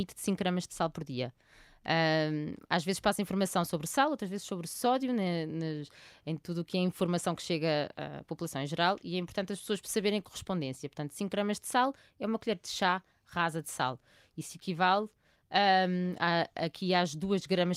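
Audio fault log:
12.73–17.76 s, call bitrate drop: just after "é uma colher de", the speech turns coarser and rougher and stays that way to the end of the clip, about 5 s. The change is consistent with the call's bandwidth estimate falling and the encoder being told to spend far fewer bits, which fits a drop from about 64 to 26 kbps. With fewer bits per frame, the Opus coder quantises the speech spectrum more crudely, and that is what degrades the sound.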